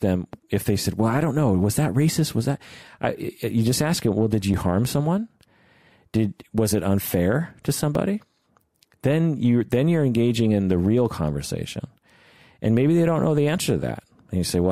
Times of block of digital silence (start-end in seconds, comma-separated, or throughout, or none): 4.54, 7.95